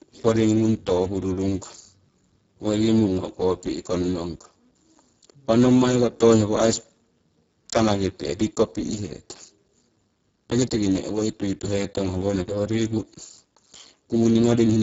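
Speex codec damage runs through the whole clip. The speech sounds heavily hoarse and noisy. That fits a very low bitrate, around 6 kbps, where the CELP coder lacks bits to model the excitation. Nothing remains above 7.6 kHz.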